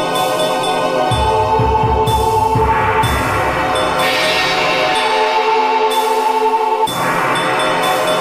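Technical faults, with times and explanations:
No technical faults can be heard anywhere in this music clip.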